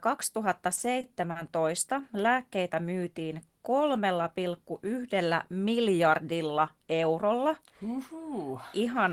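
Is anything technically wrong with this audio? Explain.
Yes. Three short stalls from a late packet occur in quick succession in this speech, at 0.75–0.80 s, 1.01–1.06 s and 1.31–1.38 s. Each time a packet arrived late, the jitter buffer ran dry and the receiver stretched the last sound by 20 ms, 20 ms and then 40 ms until the packet arrived, resuming where it left off. No audio is lost, but playback falls further behind each time. Each stall is heard as a briefly held sound with a slight buzz or dip. A spectrogram would show frozen horizontal bands at those points, and the waveform would show a short, repetitive patch.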